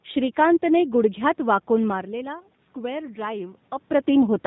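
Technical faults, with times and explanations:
Throughout: G.729 codec. The speech has that rough, slightly synthetic 8 kbit/s VoIP character, with nothing above 4 kHz. It's rebuilt from a filter plus sparse pulses, so the damage is plainly audible.
1.88 to 4.17 s: automatic gain rising. Right after "श्रीकांतने गुडघ्यात वाकून" the talker drops about 12 dB, and the AGC slowly pushes gain up about 3 dB, so voice and background swell together.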